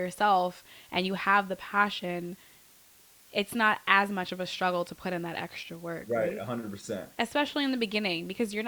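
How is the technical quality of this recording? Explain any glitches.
The quality's held back by a steady hiss running under the whole recording. It's low bit depth with dither: the speech was rounded to very few levels, which fits roughly 9-bit resolution, with dither added first, so the rounding error turns into even white noise sitting around 30 dB below the speech rather than distortion.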